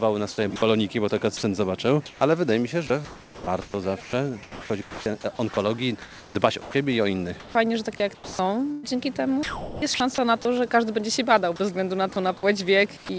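From 0.56 to 10.45 s the sound turns choppy. Quiet stretches totalling about 3 s are swapped for a synthetic hiss. A shorter burst from 11.56 to 12.16 s loses about 60 ms the same way. Both are likely sound chopped by the voice detector: the sender's detector kept switching transmission on and off, and comfort noise filled each gap. Throughout, the band-limited call audio carries nothing above 8 kHz.

From 12.97 to 13.09 s the sound gives way to steady noise for about 120 ms, and roughly 90 ms of real sound disappears. This is likely sound dropped by the voice detector, which took quiet material for background, stopped sending, and left the receiver playing comfort noise.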